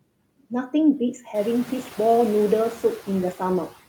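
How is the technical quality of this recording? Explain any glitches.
The recording has one processing fault, present throughout. Noise suppressor artifacts: for the whole clip, a suppressor cuts bands it judges to be steady noise by about 18 dB, frame by frame, so the background dips between words and returns beneath them. The room noise, which steps up by about 13 dB at around a second and a half, still sits about 20 dB under the speech.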